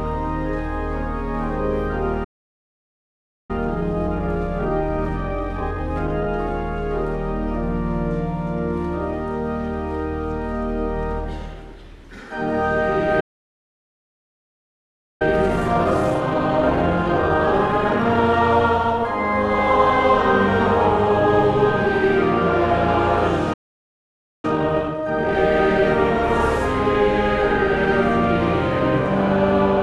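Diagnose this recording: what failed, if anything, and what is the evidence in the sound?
Playback stalls at 2.24 s, 13.20 s and 23.53 s, silent for 1.25 s, 2.0 s and 0.9 s, likely the player's buffer running dry.

Time-compressed catch-up follows each stall at 3.51–6.51 s (1.15x), 15.22–18.22 s (1.25x) and 24.45–25.35 s (2x): the sound is hurried but pitch-steady.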